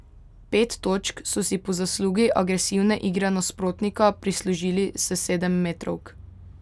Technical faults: none

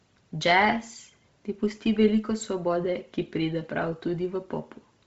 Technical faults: Bluetooth LC3 compression

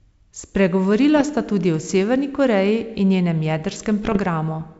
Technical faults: bit errors on an ADPCM link

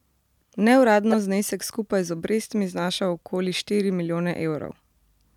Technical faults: corrupt frame decoded

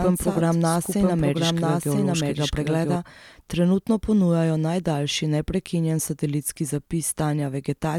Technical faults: doubled audio track

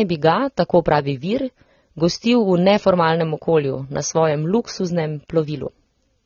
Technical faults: AAC compression

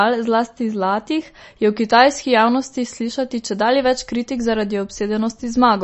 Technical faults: MP3 compression

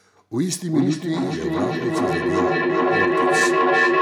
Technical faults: feedback echo between two devices

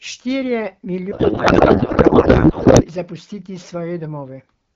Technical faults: codec payload misread

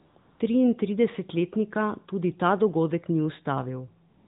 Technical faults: AMR comfort noise

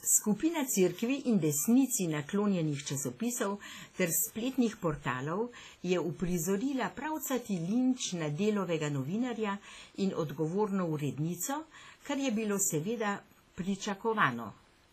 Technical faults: WMA compression

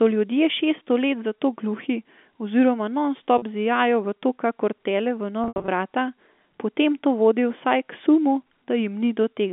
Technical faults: packet loss with pitch repetition

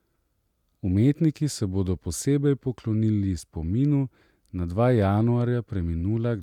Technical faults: none

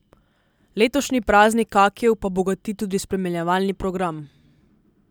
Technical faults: none

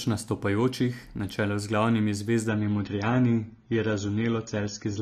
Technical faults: adaptive stream at a lower bitrate

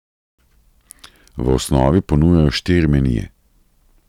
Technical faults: hard clipping

